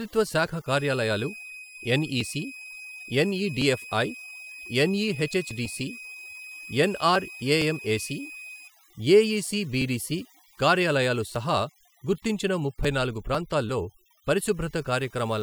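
From start to finish the speech carries overdone noise removal. The denoiser was pushed too hard, so it drops any frequency band sitting near its noise estimate. The gaps drop away and break up into twinkly little specks.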